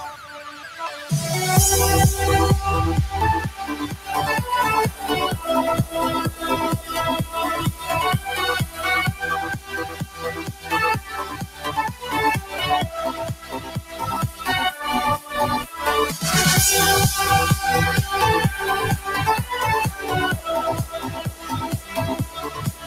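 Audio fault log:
throughout: noise suppressor applied to music or sounds. A speech-tuned suppressor stayed active and treated sustained, steady material as noise, pulling it down by as much as about 15 dB. Onsets slip through while held sound sinks, so the level pumps and thins.
0.0–1.11 s, 3.47–4.1 s, 7.72–7.89 s, 8.66–8.81 s, 9.13–12.59 s, 13.12–14.47 s, 19.91–20.46 s, 20.84 s to the end: sound cut by the noise suppressor. The suppressor judged these stretches as noise and turned them down by about 7 to 11 dB, so sustained parts and decays drop away audibly, longest across 9.13–12.59 s.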